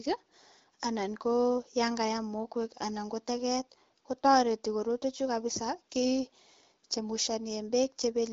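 No technical faults detected.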